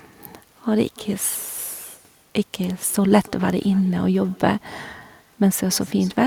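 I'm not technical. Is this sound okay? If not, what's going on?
No, there's an echo with no canceller running through the whole clip. The speech returns about a third of a second later as a faint, thin copy, because the far end's loudspeaker feeds its microphone and nothing strips that out.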